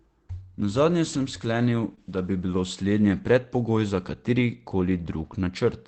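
This speech clip came through an Opus call path whose band stops near 8 kHz, and it carries two network faults. From 1.13 to 1.23 s, just before "sklenil da bi bilo", there is a lost packet rebuilt from error correction. Three separate packets went missing, but each following packet carried a low-bitrate backup copy, and the decoder played those. About 60 ms of audio therefore comes from the coarse copies instead of silence. The passage sounds rougher and grainier than its surroundings, with no dropout, and the roughness fits three 20 ms frames. From 1.95 to 1.99 s, just before "da bi bilo slednje", there is a short concealed packet loss. About 20 ms of audio arrived too late to decode. The receiver extrapolated roughly 15 ms from the preceding sound and then crossfaded back into the real signal, which leaves a brief smeared wobble where the true detail should be.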